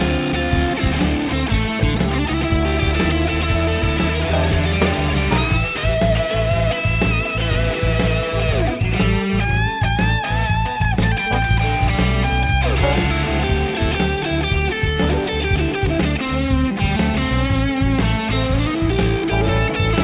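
Nothing in the audio stood out as a technical problem on listening.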